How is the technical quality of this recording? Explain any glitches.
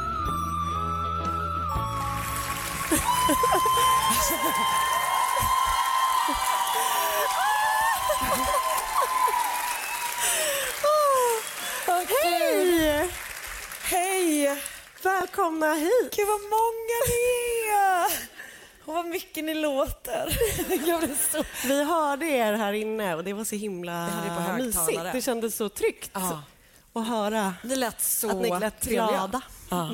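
One glitch stands out: a Bluetooth stutter at 15.21 to 15.24 s. A lost packet made the receiver replay about 23 ms of sound, giving a brief catch. On a waveform that short segment visibly repeats, and a spectrogram shows a duplicated block with vertical seams.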